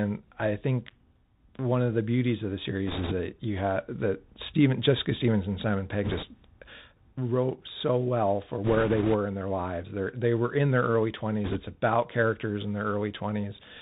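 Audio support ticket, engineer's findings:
Narrowband, muffled speech throughout, nothing above 4 kHz, with a grainy hiss beneath it and scratchy s sounds. Bluetooth CVSD headset codec, consistent with a 64 kbps link. A one-bit up/down delta coder's adaptive step can't track fast, bright transients, so sibilants smear and distort.

Bursts of rushing, crackly noise at 2.87–3.13 s, 6.04–6.24 s, 8.64–9.15 s and 11.44–11.60 s, with no sharp clicks. Bit errors on the Bluetooth voice link, at a rate of a few percent. Flipped CVSD bits each nudge the waveform by an amount that grows with the speech level, and the decoder recovers quickly.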